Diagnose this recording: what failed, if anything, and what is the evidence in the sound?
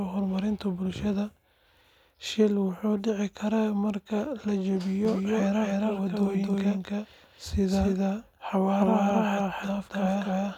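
A doubled audio track, most likely from the speech being captured a second time through a slower routing path, begins abruptly at 5.05 s, just after "marka la", and lasts to the end. A dry, full-band copy trails by roughly 300 ms at about the original's level.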